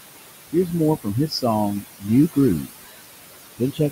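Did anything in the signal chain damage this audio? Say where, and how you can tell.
Yes, in call processing: the noise suppressor is at work throughout, giving noise suppressor artifacts. The room noise sits about 10 dB under the speech. It gets pulled down by about 19 dB in the gaps, then swells back under the speech.

The same stage also causes speech cut by the noise suppressor, in four spots: 1.28 to 1.44 s (about 13 dB down), 1.8 to 2.09 s (about 22 dB), 2.61 to 2.85 s (about 21 dB), and 3.58 s to the end (about 16 dB). Soft bits of speech drop out and sound swallowed, because the suppressor treated them as noise and turned them down with the background.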